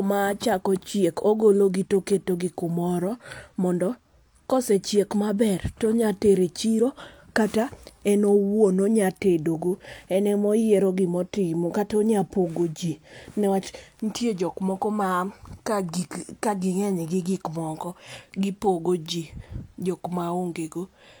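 No technical faults are audible anywhere in the speech.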